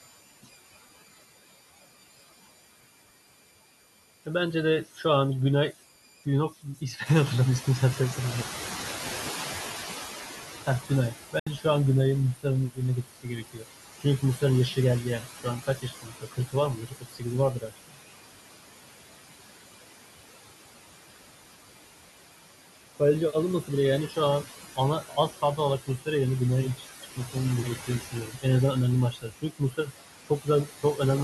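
Running through the whole speech clip are converter idle tones: a whistle near 2 kHz, about 21 dB below the signal. It is clearest in pauses and turns grainy under quiet passages. An undithered delta-sigma converter handling a small input falls into repeating bit patterns, and these produce the tone. On a spectrogram it shows as a thin horizontal line around 2 kHz that persists through the gaps between phrases.

Noise suppressor artifacts are also present throughout. The suppressor lowers each frequency band it judges to be steady noise, one frame at a time. The background therefore sinks between phrases and swells back under them. On a spectrogram the noise floor looks blotchy and patchy instead of a smooth, even wash.

Speech cut by the noise suppressor first occurs from 4.84 to 5.05 s, with a drop of about 11 dB over roughly a tenth of a second. It happens again from 5.72 to 7.08 s, with about 12 dB of loss. 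Here the suppressor mistook soft speech for noise, so consonants and word endings sound swallowed. In the waveform these show as brief, sudden dips in the envelope.

At about 7 s the room noise rises by about 11 dB, and the noise suppressor is caught catching up from 7.05 to 10.35 s. Its noise estimate lags by about 3.3 s, so the louder background passes through with less reduction at first and then sinks by about 13 dB as the estimate adapts. A spectrogram shows a bright band of broadband noise that fades gradually over that stretch.

Speech cut returns from 10.66 to 11.65 s, with about 14 dB of loss. Within that span, at 11.39 to 11.47 s, roughly 70 ms of audio vanishes completely and then resumes as though it had kept playing. This is likely a Bluetooth dropout, consistent with about three packets failing to reach the headphones in time. The waveform shows a flat gap.

Further speech cuts follow at 12.35 to 18.01 s, where about 3 s in total are affected with drops of up to about 17 dB. 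They also occur at 22.95 to 26.07 s (about 17 dB), 26.76 to 28.45 s (about 15 dB) and 29.12 to 31.0 s (about 17 dB). Each leaves faint, swallowed syllables that appear as hollowed-out patches in the spectrogram.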